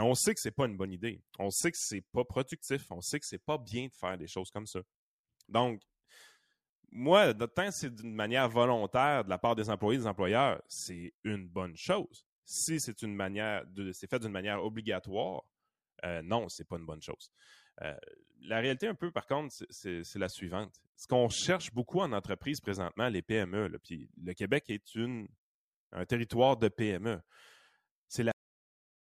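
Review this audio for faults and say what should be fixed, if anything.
The speech has a cut-off end. At 28.32 s the audio stops mid-sound. It falls straight to digital silence, with no natural decay. That silence runs to the end of the file at 29.09 s, roughly 0.77 s. The final buffers of audio were never written out, so the sound is chopped off rather than finishing. To prevent it, flush and write every remaining buffer before closing the file.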